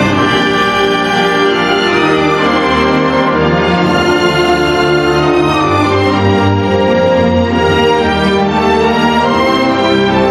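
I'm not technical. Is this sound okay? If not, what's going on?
No. There is gain pumping all the way through. That is likely a recording level set too high, with an automatic leveller pulling it down on every peak. The sound ends up squashed and flat.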